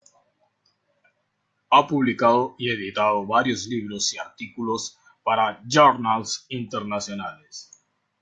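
A speech recording with nothing technically wrong with it.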